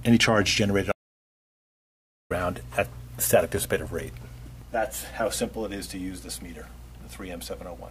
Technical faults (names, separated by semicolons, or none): audio dropout to silence